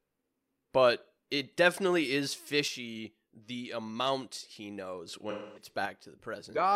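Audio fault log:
2.68–5.08 s, one channel drops out: right after "but it definitely is" the sound falls abruptly by about 6 dB, likely because one stereo channel was lost before the mono sum.
5.30–5.69 s, AAC frame loss with concealment: the decoder lost about 256 ms of data, consistent with six frames, and patched it from the last good spectrum, leaving a smeared, noisy stretch.
5.85–6.76 s, one channel drops out: the level again drops suddenly by about 6 dB and stays down to the end, likely as half of the summed signal goes missing.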